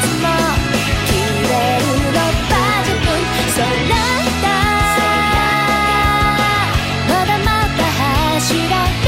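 No technical faults can be heard anywhere in the recording.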